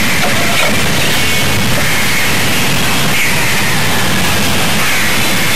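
A distortion rides on the sound from start to finish, and the quiet gaps fill with a gritty noise instead of falling silent. This is likely a stuck bit, with one data bit frozen at 0 or 1 so that about half the samples are pushed off by that bit's weight, and small values crossing zero are scrambled into noise.

Throughout the clip the sound is also dull and muffled, with a plainly audible gurgling, granular texture and upper frequencies that seem to come and go. This likely comes from MP2 compression at a low rate, consistent with about 80 kbps, which switches off starved upper sub-bands and coarsely quantises the rest.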